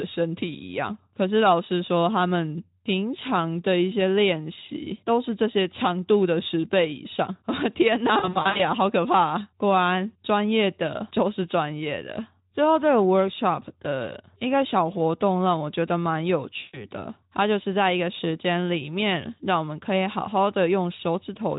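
At 8.19 to 8.63 s the speech breaks up through VoIP packet loss concealed by the speech codec. About 220 ms of audio is missing, scattered over roughly 400 ms in gaps of up to 60 ms. The decoder bridges each gap by repeating its last pitch and filter at falling gain, giving brief buzzy, fading smears. At 16.59 to 16.85 s a further 140 ms is lost the same way, and the voice sounds weak until the decoder recovers. The lightly coded Speex at 15 kbps underneath adds slight hoarseness.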